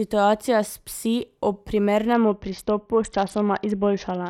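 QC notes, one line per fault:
2.13–4.30 s, Bluetooth SBC bit pool drop: from 2.13 s to the end of the speech, the top end collapses and a gritty, granular noise rides on the sound. The encoder has cut its bit allocation sharply, consistent with a fall from a bit pool near 28 to about 7, or roughly 66 kbps. The highest sub-bands get few or no bits, and the remaining bands are coarsely quantised, so the treble dulls while quantisation grit rises.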